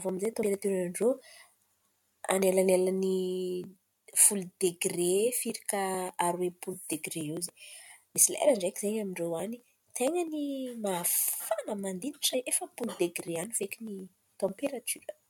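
Brief glitches at 0.42, 7.48 and 12.33 s come from damaged data in a compressed stream. Corrupted frames upset the decoder, which loses sync before recovering.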